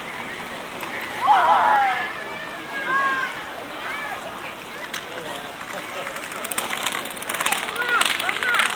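A recording of everyday sound opens with a doubled audio track. From the start until 1.76 s, a second full-band copy trails the original by about a fifth of a second at around 5 dB lower, then drops out abruptly. Unlike room echo or reverb, there is a single repeat with no decay tail and no added room colour. The likely cause is a second, slower capture path or an edit leaving two copies out of step.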